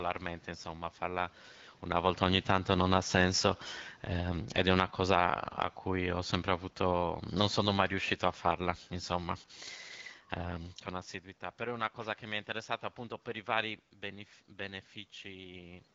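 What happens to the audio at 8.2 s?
The level is still being pulled down by automatic gain falling, which runs from 2.19 to 9.39 s. Having judged the input too loud or its background noise too strong, the gain control lowers its gain gradually, by about 9 dB in total. Unlike a talker moving away, the room background sinks along with the speech.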